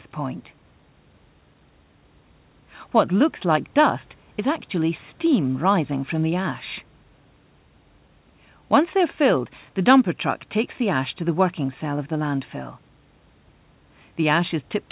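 No technical faults can be heard in the speech, which has the narrow telephone band of a call path with nothing above 4 kHz, consistent with G.711 A-law at 64 kbps, and faint room noise sitting about 38 dB below the speech.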